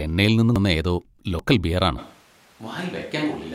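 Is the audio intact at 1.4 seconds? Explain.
No. At 1.39 s, just before "ബിയർ ആണ്", there is a jump in the speech where roughly a tenth of a second is missing, with no gap of silence. This is likely a dropped buffer (overrun): samples were overwritten before being read, and the surrounding audio was spliced together directly.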